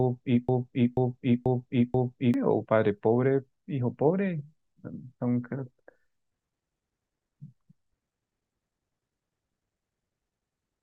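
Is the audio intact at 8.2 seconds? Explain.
Yes, the audio is intact at 8.2 seconds, with no fault present at that moment.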